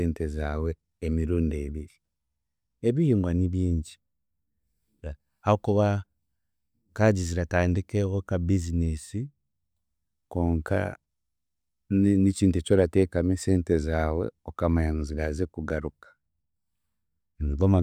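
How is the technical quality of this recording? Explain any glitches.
No glitches or technical faults can be heard anywhere.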